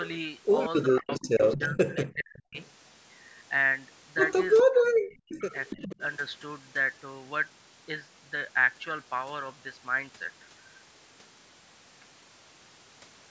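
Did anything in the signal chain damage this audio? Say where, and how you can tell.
Yes. Echo leak at the call-processing stage, likely a loudspeaker-side canceller: copies lagging 413 ms at 0.88–2.06, 2.54–2.68, 4.57–4.63 and 5.41–6.02 s appear as offset spectrogram harmonics, about 10–30 dB below the speech.

Speech suppressed in double talk, same stage: at 0.99–2.56 and 4.63–6.01 s the canceller likely ducks the talker by up to about 40 dB, leaving chopped waveform gaps.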